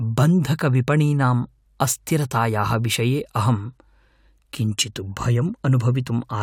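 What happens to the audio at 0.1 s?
Nothing goes wrong at 0.1 s; the speech is intact there, with no dropout, click or distortion.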